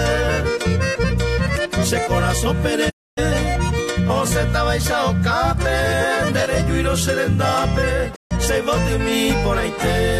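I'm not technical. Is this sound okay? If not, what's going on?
No, there are two short gaps. Around 2.89 to 3.19 s and again at 8.14 to 8.33 s the sound quickly fades out and then comes back. These are digital broadcast dropouts: the receiver lost a clean signal and muted, so those moments are gone.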